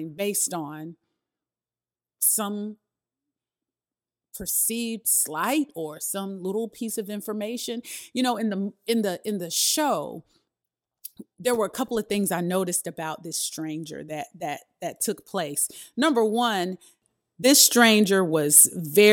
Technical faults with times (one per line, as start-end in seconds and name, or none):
none